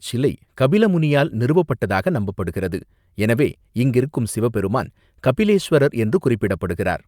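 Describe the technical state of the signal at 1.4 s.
At 1.4 s the speech signal is intact, with no dropout, clipping, glitch or other fault to be heard at that moment.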